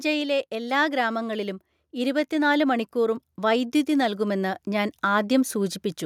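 Automatic gain rising runs from 0.5 s to 5.86 s. The gain control judged the incoming speech too quiet and slowly turned itself up by about 12 dB. Speech and background noise swell together across those five seconds instead of holding a steady level.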